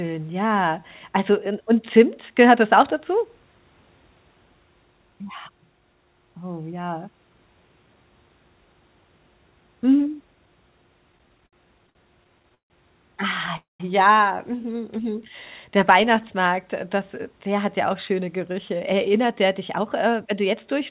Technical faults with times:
11.12-12.71 repeated stalls (stutter)
13.57-13.81 call audio freeze
18.12-20.74 jitter buffer speed-up

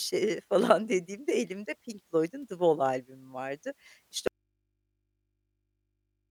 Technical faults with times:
4.28-6.30 audio dropout to a faint residue

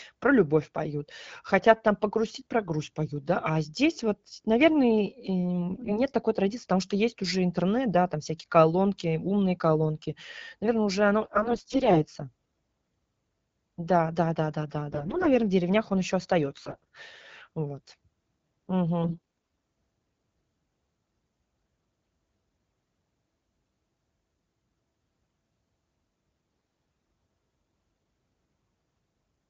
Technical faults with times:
5.73-6.00 AMR bit errors
11.22-12.01 AMR bit errors
14.90-15.28 AMR bit errors
16.57-16.84 AMR bit errors
19.02-19.54 AMR bit errors
26.49-26.81 AMR bit errors

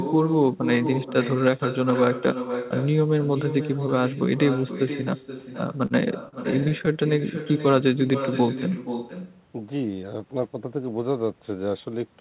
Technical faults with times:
0.00-12.21 echo with no canceller
5.86-5.92 short stall from a late packet
6.28-6.94 repeated stalls (stutter)

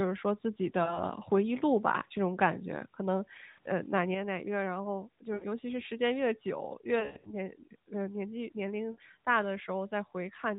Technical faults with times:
0.84-1.02 lost AMR speech frames
3.50-3.59 lost AMR speech frames
5.34-5.46 lost AMR speech frames
7.00-7.34 lost AMR speech frames
8.92-8.99 lost AMR speech frames

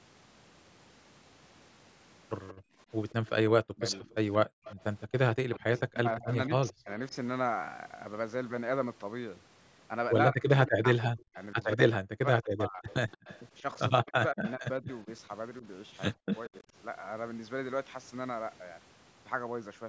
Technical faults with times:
2.48-6.72 echo leak
2.54-2.78 background gated by the echo canceller
3.61-4.10 speech suppressed in double talk
4.46-4.64 background gated by the echo canceller
5.35-6.89 speech suppressed in double talk
10.32-16.64 speech suppressed in double talk
12.88-14.52 echo leak
16.33-16.40 echo leak

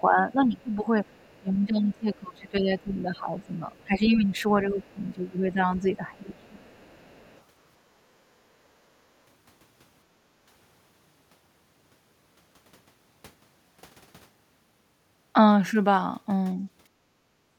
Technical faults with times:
0.00-6.69 speech suppressed in double talk
1.11-1.40 other side's voice leaking through
3.41-3.86 other side's voice leaking through
6.34-7.41 other side's voice leaking through
7.95-8.08 background gated by the echo canceller
10.21-10.32 background gated by the echo canceller
16.87-17.46 background gated by the echo canceller

